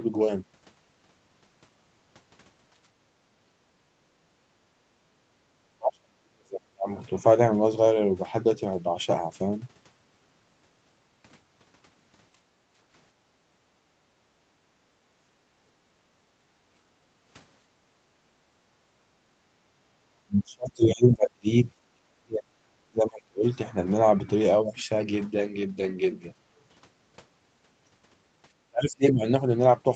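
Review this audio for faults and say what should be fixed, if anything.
Background gated by the echo canceller occurs five times: 3.01 to 3.14 s, 4.03 to 5.12 s, 12.46 to 12.74 s, 13.41 to 16.68 s and 18.09 to 18.24 s. The room sound dips by about 8 to 14 dB, deepest in the long stretch from 13.41 s. Far-end audio was playing. The canceller pulled the microphone level down and released it afterwards. The background pumps in and out. Tuning the canceller to suppress less aggressively when the near end is quiet would prevent this.

Speech suppressed in double talk appears at 5.4 to 6.88 s, 19.74 to 23.45 s and 28.66 to 29.23 s. The voice drops steeply, by roughly 35 to 40 dB. The longest loss spans most of the 19.74 to 23.45 s stretch. The likely cause is both sides talking at once. The canceller could not tell the local talker from the loudspeaker echo, so it cut both. A canceller with better double-talk detection, or a headset that removes the echo path, would prevent this.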